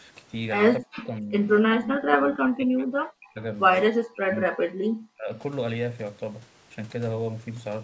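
From 0.79 to 1.33 s, 1.61 to 3.41 s, 3.88 to 4.87 s and 5.06 to 5.3 s, the speech dips by as much as about 40 dB or drops out in pieces. This is likely speech suppressed in double talk, which removes sound rather than adding any. Within the first two stretches, at 0.97–1.08 s and 1.98–2.16 s, a faint copy arrives 240 ms late at about 15 dB below the speech. That points to echo leak, an added delayed repeat rather than a loss.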